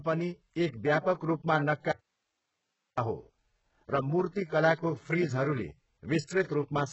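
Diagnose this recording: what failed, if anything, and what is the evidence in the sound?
Codec stage. Throughout the clip the speech carries heavy coding damage, with a treble that does not match the lower bands. A spectrogram shows nothing above 7.9 kHz, and the upper band looks like a copied, coarsely shaped repeat of lower bands, so harmonics do not line up across the crossover. This is likely HE-AAC compression at a very low bitrate, around 8 kbps, with spectral band replication rebuilding the treble.

Network or buffer stage. From 1.92 to 2.98 s the speech cuts out abruptly for about 1.06 s, leaving only hiss some 55 dB below the speech, then returns mid-flow. The waveform shows a sudden flat stretch of low-level noise with sharp edges, not a fade. This is likely an audio dropout to a faint residue: the signal was lost while the path after the break stayed live.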